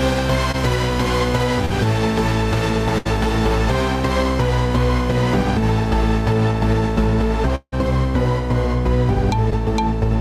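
Right at the start, 0.51 to 0.55 s, there's a short concealed packet loss: about 20 ms of audio never made it to the decoder in time, so the receiver papered over it by extending the last sound. You hear it as a quick smear before things blend back.

Then come two bursts of packet loss, at 1.65 to 1.72 s and 2.98 to 3.07 s. A run of packets went missing, about 40 ms and then 80 ms. The receiver stretched the last sound into a held buzz or fading hiss, and the audio picks up further along with that bit gone.

At 7.55 to 7.74 s it sounds like a long network dropout is the likely cause. The sound is held and fades away over roughly 170 ms, with a brief stretch of silence, about 50 ms, before the audio returns minus about 160 ms.

Finally, 9.50 to 9.53 s brings another short concealed packet loss, about 10 ms filled in, heard as a tiny wobble.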